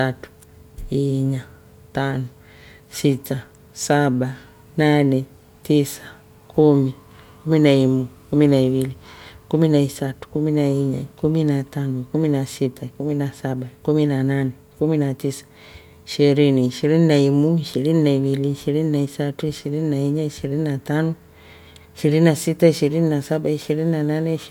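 Right at the tail, from 23.19 s through to the end, the speech picks up a crude rate conversion. Samples look to have been simply repeated to stretch the sound onto a faster clock, which fits a jump from 44.1 kHz to 48 kHz done with no filtering. That repeat pattern throws off tones unrelated to the speech, sitting roughly 30 dB down, so you hear a gritty, fizzy edge riding on the louder and brighter sounds.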